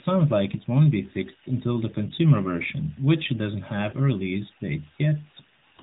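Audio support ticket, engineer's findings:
Brief dips or warble at 0.52–0.56 s, 2.16–2.20 s and 3.90–3.96 s: lost AMR speech frames. Each is one corrupted 20 ms frame, concealed by repeating prior parameters at reduced gain.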